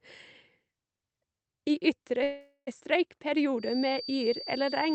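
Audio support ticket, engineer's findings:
Call audio freeze, 2.23–2.69 s: likely delayed packets draining the jitter buffer. Last sound extended as a fading buzz or hiss, brief silence, then speech resumes 0.44 s late with nothing lost.

Feedback whistle, 3.56 s to end: speaker-to-mic loop likely held at the edge of feedback. Thin, steady 4.6 kHz tone about 15 dB under the speech, swelling and fading slowly.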